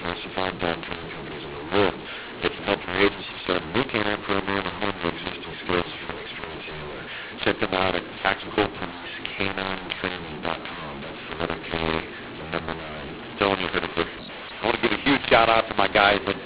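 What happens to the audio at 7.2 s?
At 7.2 s the speech is harsh and grainy, as it is through the whole clip, because of a mu-law and A-law mix-up: mu-law telephone samples are read with the A-law curve. This mis-scales levels and lifts near-silent samples, so pauses fill with noise. Ordinary clipping would only flatten peaks.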